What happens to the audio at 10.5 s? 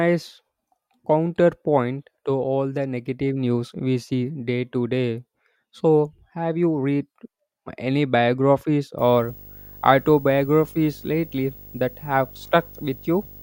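Video or display buzz from 8.98 s to the end: a nearby screen or cable couples in a 50 Hz buzz with hash and a 15.6 kHz line tone, about 20 dB below the speech.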